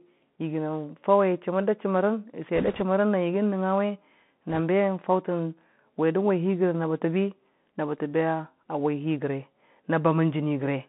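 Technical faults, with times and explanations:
throughout: Bluetooth CVSD headset codec. The speech sounds narrow and boxy, held to about 150 Hz to 3.5 kHz, with scratchy s sounds, grainy hiss underneath and roughness on loud peaks. One-bit delta coding, consistent with a 64 kbps link, lets its adaptive step lag behind fast, bright changes.
2.56–2.83 s and 4.50–4.60 s: bit errors on a Bluetooth voice link. Short bursts of rushing, crackly noise sit over the speech, with no sharp clicks. Each flipped bit nudges the delta stream only slightly and fades, so damage spreads as noise. The first burst, at roughly 2 percent errors, is rougher than the second.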